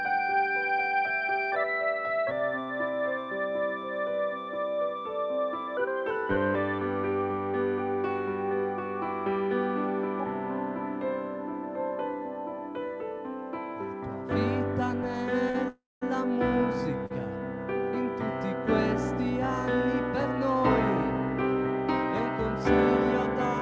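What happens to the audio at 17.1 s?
A late packet caused a short stall from 17.06 to 17.12 s. The packet had not arrived when it was due, so the jitter buffer ran dry and the receiver filled about 40 ms by stretching the last sound it had. When the packet turned up, playback picked up where it left off, so nothing is lost, but the sound lingers unnaturally for a moment, with a faint buzzy or dipped quality, and everything after it runs 40 ms later.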